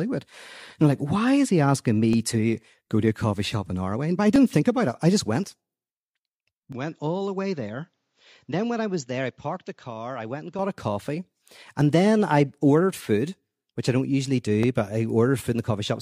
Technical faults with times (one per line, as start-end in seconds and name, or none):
2.13 dropped samples
4.36 dropped samples
5.44 dropped samples
6.72-10.59 input switched to a poorer device
14.63 dropped samples